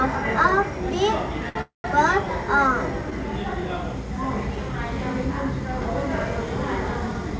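At 1.49 s there's a short stall from a late packet. The sound just hangs for about 64 ms, with a faint buzzy hold, until 1.58 s. The jitter buffer ran dry, so the receiver stretched the last bit and then carried on from the same spot, with nothing lost.

Right after, from 1.61 to 1.87 s, there's a call audio freeze. The held sound decays into roughly 140 ms of silence, about 228 ms of inserted gap in all, before picking up where it left off. That's likely packets held up in transit, emptying the buffer again. It's all band-limited to 8 kHz, which fits a G.722 call path.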